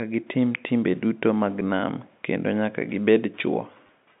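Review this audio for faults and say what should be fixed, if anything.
There's packet loss with the last packet repeated at about 1.6 s and again from 3.87 to 3.89 s. The receiver replays a held chunk that doesn't line up with the pitch, giving a small blip at 1.6 s and a brief robotic stutter at 3.87 s, which fits 10 ms packets. A jitter buffer with proper loss concealment, plus a look at the network path, should sort it.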